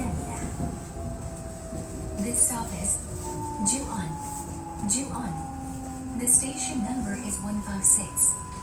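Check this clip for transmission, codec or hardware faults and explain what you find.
There's one codec fault, and it runs the whole length of the clip. It sounds like Opus compression, likely in its music (CELT) mode. Band energy is held while missing detail gets patched with folded or noise fill, so tones come out grainy, rough and noisy rather than swirly. The damage is plainly audible, though the full bandwidth is kept, which fits an encode at around 24 kbps.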